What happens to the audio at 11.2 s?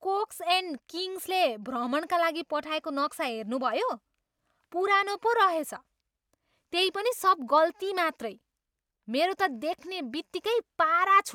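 At 11.2 s, near the very end of the clip, the audio is intact, with no dropout, click, distortion or other technical fault.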